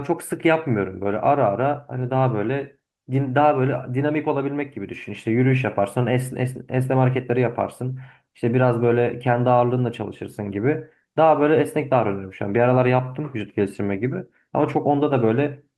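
A speech recording with no audible technical faults: the signal stays continuous and steady throughout, with nothing in it that points to a problem in recording, processing or transmission.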